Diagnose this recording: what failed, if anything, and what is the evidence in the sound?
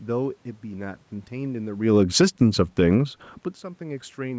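The call processing stage is where this one goes wrong: automatic gain falling. From 1.73 s to 2.78 s the whole level sags by about 4 dB, speech and room noise together, which gives it away. A talker shifting position around 2 s would change only the voice. Here the AGC decided the input was running hot or its background noise too strong and eased its gain down gradually, dragging the background along with it, while the 8 kHz-limited call band stays unchanged.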